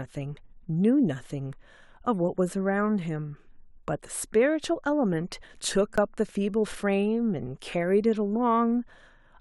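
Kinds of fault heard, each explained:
Underrun with held sample: at 5.96 s the output ran dry for about 17 ms and the converter froze on its last value, so the waveform goes flat. Unlike a dropout to silence, it starts with little or no click, and most of that stretch of speech was skipped.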